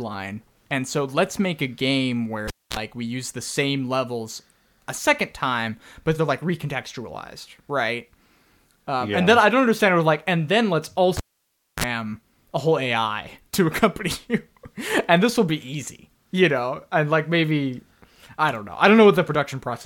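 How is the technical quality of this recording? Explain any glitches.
The recording has two glitches of the same kind, each a cable pulled and plugged in.

At 2.48 to 2.77 s, after "make a game where" and before "we use the same", a pop cuts the speech to near silence for about 0.24 s. A 37 ms burst of 60 Hz mains buzz follows as the plug's tip touches first, then a second pop as the sound returns.

At 11.17 to 11.84 s, after "like and then let's", the same happens with a longer gap of about 0.62 s and a 40 ms buzz at 50 Hz.

The hum burst between the two pops is what tells this apart from a plain dropout.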